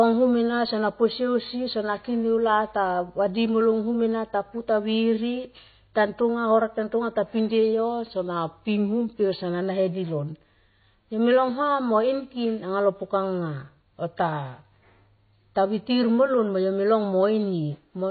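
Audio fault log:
throughout: MP3 compression, likely cause of the plainly audible watery, swirly quality and the absence of anything above 4.6 kHz; the damage fits a bitrate around 24 kbps. Starved of bits, the encoder drops weak frequency lines that flicker from frame to frame, smearing attacks and making s sounds chirp. A plain low-pass filter would cut the top without this swirl.
8.16–9.61 s: drift correction step, likely from clock-matching software that changed the playback rate in one jump to rebalance its buffer. Speed falls 5.24% and pitch drops about 93 cents, nearly a semitone, together and at once, then both return at 9.61 s. A pitch shifter would leave the tempo untouched, and wow would waver rather than step.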